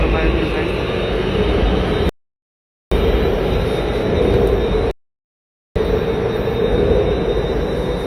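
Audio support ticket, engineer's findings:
Rebuffering stall, twice: dead silence 2.09–2.92 s and 4.91–5.76 s, roughly 0.82 s and 0.85 s each. Player buffer ran dry, then resumed right where it left off. Nothing lost, just time added.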